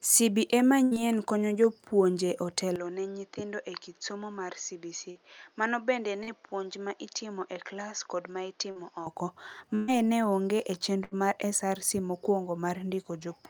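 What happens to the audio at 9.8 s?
At 9.75 s a burst of packet loss begins, lasting to about 9.91 s. About 120 ms of the speech never arrived in time, so the receiver filled roughly 123 ms by extending the last sound it had and steadily turning it down, with no true silence. On a spectrogram the final spectral shape is smeared flat across the gap and fades, and then the speech restarts abruptly with a section missing. The waveform shows a decaying, repetitive envelope.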